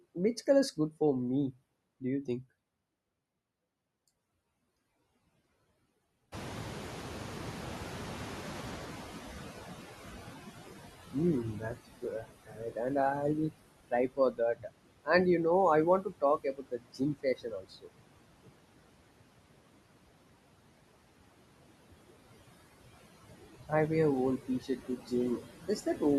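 Throughout the speech, noise suppressor artifacts are present: the suppressor pulls down about 18 dB of steady background in each band, frame by frame, so noise dips between phrases and swells under them. On a spectrogram the noise floor looks blotchy and patchy rather than even.

From 6.32 to 10.89 s the noise suppressor is catching up. The room noise jumps by about 18 dB around 6.5 s, and the suppressor's estimate takes roughly 4.6 s to follow, so the louder background first comes through with less reduction and then sinks as about 16 dB of cut returns. A spectrogram shows a bright band of broadband noise fading over those seconds.

Speech is then cut by the noise suppressor at 11.54–11.79 s (about 11 dB deep), 12.02–12.26 s (about 9 dB), 12.44–12.78 s just before "and I will" (about 19 dB), 13.91–14.75 s just after "and I will" (about 22 dB), 16.02–18.08 s (about 22 dB, well over a second affected), and 24.38–25.12 s after "I wear" (about 17 dB). 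The suppressor mistakes soft speech for noise, so endings and quiet stretches sound swallowed. The waveform shows sudden hollows in the envelope, and the spectrogram shows speech energy missing.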